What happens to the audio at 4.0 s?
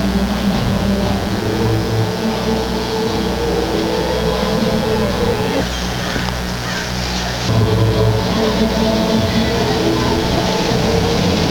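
At 4.0 s, as throughout the clip, a mains buzz sits under the sound: switching spikes twice per 60 Hz cycle spread harmonics into the kilohertz range, giving a steady, raspy buzz only around 10 dB below the audio itself.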